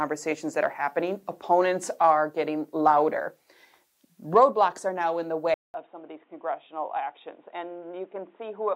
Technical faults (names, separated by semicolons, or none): input switched to a poorer device